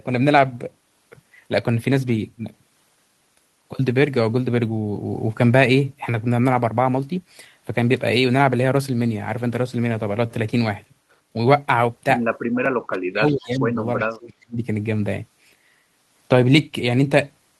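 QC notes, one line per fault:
12.86–13.79 s and 13.98–14.63 s, speech suppressed in double talk: the speech sinks in chunks, about 40 dB down at worst in the first stretch and about 30 dB in the second. This is likely an echo canceller treating simultaneous talk as its own echo and attenuating everything.
13.29–13.59 s and 13.99–14.04 s, echo leak: a faint delayed copy of the speech, trailing by 350 ms and sitting roughly 20 dB below it, slips through in short scraps. A loudspeaker-side canceller has likely failed to cancel all of the returning signal.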